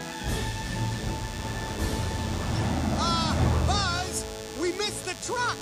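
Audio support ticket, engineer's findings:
DECT cordless phone buzz, entire clip. Thin, steady buzz repeating at 100 Hz, about 15 dB under the audio. A nearby DECT handset or base transmits a burst every 10 ms, which the audio input circuitry rectifies. Dense harmonics and a pulsed edge set it apart from smooth mains hum.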